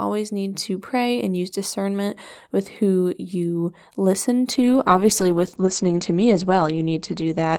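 A speech recording with a call bitrate drop beginning at 4.52 s and lasting to the end of the clip. The audio turns coarse and watery, and the top end is lost as the audio bandwidth narrows from 20 kHz to 8 kHz, leaving a muffled, band-limited sound. The degradation is consistent with the encoder falling from roughly 48 kbps to about 11 kbps after the call's bandwidth estimate dropped, and it does not recover before the recording ends.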